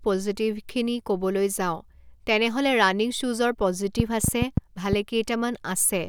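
From 4.00 to 4.94 s a train of clicks ticks over the speech: about seven sharp pops at an uneven pace near 5.4 per second, standing roughly 20 dB above the signal. The likely cause is nearby interference or a faulty connection or power supply. They appear as thin vertical broadband streaks on a spectrogram and narrow spikes on the waveform.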